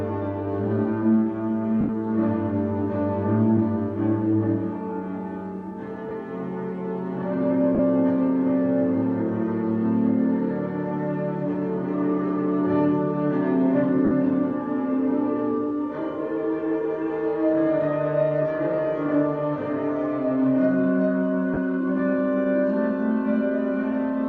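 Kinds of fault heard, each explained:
Lost LE Audio frames: Bluetooth LE Audio frames went missing, and the LC3 decoder filled each gap by repeating the last spectrum with random signs. Five brief noisy smears result, at 1.81, 6.09, 7.75, 14.05 and 21.54 s, lasting 80, 20, 40, 60 and 30 ms.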